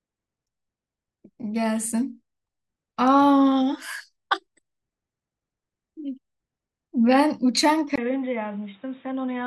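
At 7.96 s the speech drops out for about 20 ms and returns dull and boxy, with nothing above 3.8 kHz, a few decibels quieter and over a new background noise about 30 dB below the speech, until the end. This is likely an input switched to a poorer device. A codec falling back to a narrower band would also cut the treble, but not the level, the noise floor and the tone together, nor leave a gap at the switch.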